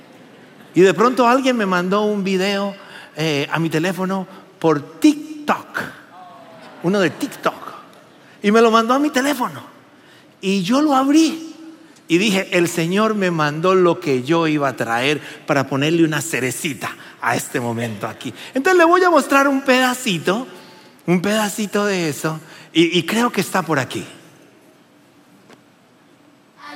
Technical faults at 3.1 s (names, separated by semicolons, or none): none